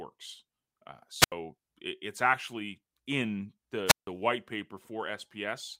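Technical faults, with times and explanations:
1.18 to 1.33 s, wireless microphone squelch dropout: the radio link from the analogue FM microphone weakens until the receiver's squelch cuts the output. As the signal fades, hiss and static swell, then the sound drops into a near-silent gap of about 79 ms before the speech returns.
3.86 to 4.07 s, wireless microphone squelch dropout: the same fade trips the squelch again, this time for longer. The static rises, and a silent hole of about 160 ms opens before the speech comes back.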